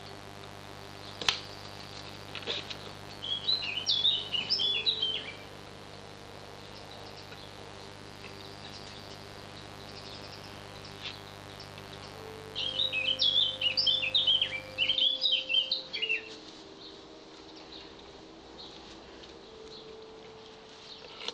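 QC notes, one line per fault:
0.00–14.94 s, mains buzz: a steady, raspy buzz about 15 dB below the signal. Sharp switching spikes twice per 50 Hz cycle produce stacked 50 Hz harmonics up to several kHz, shown as evenly spaced horizontal spectrogram lines and 100 Hz spikes in the waveform.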